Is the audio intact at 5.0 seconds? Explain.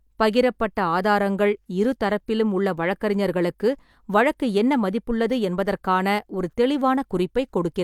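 Yes, the speech at 5.0 seconds plays through intact, with no dropout, click, distortion or other fault at that point.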